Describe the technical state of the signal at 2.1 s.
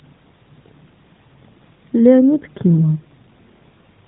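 At 2.1 s the speech is intact, carried through the narrowband mobile codec path as it should be, with its band limit and light codec colouring but no fault at that moment.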